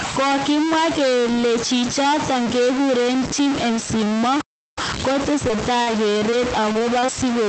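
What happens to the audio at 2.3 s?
At 2.3 s the speech carries distortion, and the pauses fill with hiss. It runs through the whole clip. A stuck bit is the likely cause: one data bit held fixed, pushing about half the samples off by its weight.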